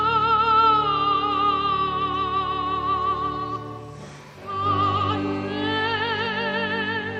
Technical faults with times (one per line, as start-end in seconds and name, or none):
none